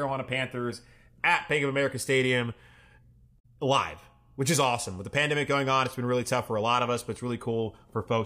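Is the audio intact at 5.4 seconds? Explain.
Yes, at 5.4 seconds the speech runs on without any audible dropout, click, glitch or other technical fault.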